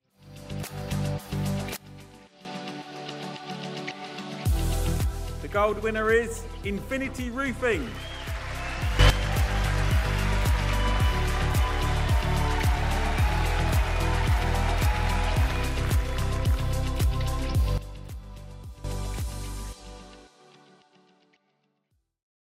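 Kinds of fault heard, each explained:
Sudden gain jump: three abrupt level steps, down about 15 dB, up about 12 dB, then down about 14 dB, with the background noise shifting too, likely from a gain change applied without a ramp. The waveform envelope shows square-edged steps, and the spectrogram changes brightness evenly across all frequencies.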